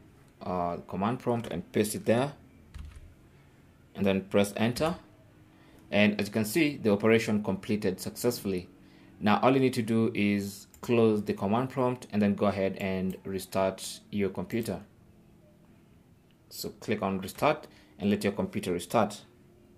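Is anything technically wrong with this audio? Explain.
Yes. At 17.23 s there is a corrupt frame decoded: one compressed frame arrived with flipped bits, and the decoder rendered it instead of concealing it. Misread gain values or spectral codes placed energy at the wrong frequencies for roughly the length of that single frame, about 14 ms. The result is a brief, sharp blip that does not belong to the surrounding sound, peaking at about -35 dBFS, quiet but audible as a foreign click-like chirp.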